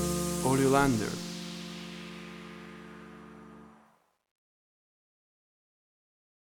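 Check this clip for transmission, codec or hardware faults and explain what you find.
One fault is present, in the closing fade-out. Truncation distortion on the fade runs from 3.86 s to the end at 6.56 s. The gain stage applies the fade but drops the low bits without dither, which fits an 11-bit path. As the level sinks toward the smallest step, the waveform collapses into coarse square steps. From 4.56 s to 6.56 s the tail turns gritty instead of thinning out cleanly.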